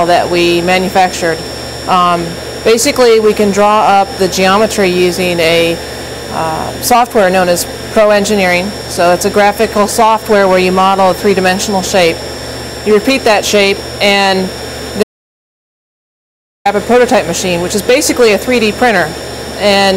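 At 15.03 s the sound cuts off abruptly into dead digital silence, with no room tone underneath, and resumes mid-flow at 16.65 s after about 1.6 s. This is an audio dropout to silence, most likely the input signal being lost while the recorder kept writing zeros.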